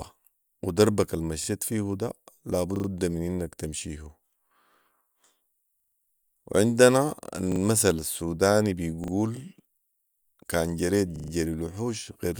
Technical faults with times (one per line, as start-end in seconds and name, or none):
1.44-1.48 repeated buffer
2.76-2.88 repeated buffer
5.80-5.96 repeated buffer
7.52-7.60 repeated buffer
9.04-9.12 repeated buffer
11.16-11.32 repeated buffer